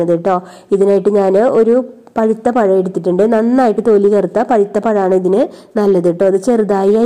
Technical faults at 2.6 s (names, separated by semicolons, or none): none